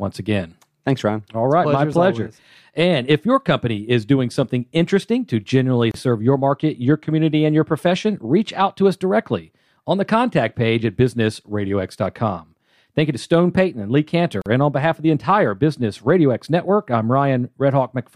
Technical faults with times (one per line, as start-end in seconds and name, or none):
5.91-5.94 gap at a join of encoded pieces
14.42-14.46 gap at a join of encoded pieces